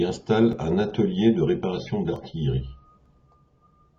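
At 0.53 s the speech jumps. There is no silence, just a few milliseconds of sound missing and the two sides butted together. This is likely a dropped buffer (overrun), where the hardware overwrote samples before the program read them. On a waveform it shows as a sudden step discontinuity, and on a spectrogram as a thin vertical broadband line.

Right after "installent un", at 0.85 s, the adaptive stream switches to a lower bitrate and stays there until 2.85 s. The quality changes abruptly, and the speech takes on a more smeared texture with stronger codec artefacts. That fits a drop from about 96 to 24 kbit/s AAC-LC. A spectrogram shows the change across that span, with no gap at either edge.

Inside that stretch, at 2.16 s, the same kind of jump recurs, again with a few milliseconds lost. A third, smaller one follows at 3.06 s, losing a millisecond or two. Each appears as another vertical tick on the spectrogram.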